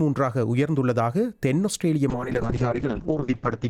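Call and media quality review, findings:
Call bitrate drop from 2.11 s to the end: audio goes rough and muffled, top end gone above 8 kHz, worst for about 1.19 s. Sounds like Opus starved after a bandwidth-estimate dip, fitting a fall from around 96 kbps to roughly 6 kbps.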